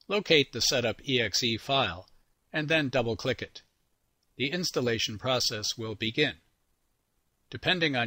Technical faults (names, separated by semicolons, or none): none